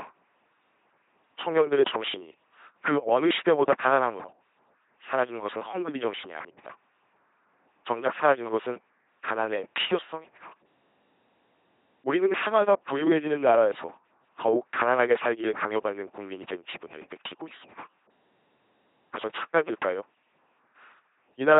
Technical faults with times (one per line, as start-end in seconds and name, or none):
0.00-21.59 LPC-10 vocoder